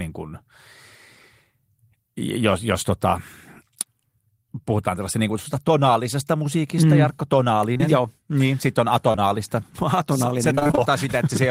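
A brief smear at 7.73 to 7.81 s, and again at 9.11 to 9.19 s just after "sitten on", is short concealed packet loss: two back-to-back 20 ms packets each time never arrived, and the decoder extended the preceding sound to fill the gap. From 10.55 to 10.79 s the speech turns choppy. This is repeated packet loss: six gaps of about 20 ms each, so roughly half of that stretch is patched continuation rather than real audio.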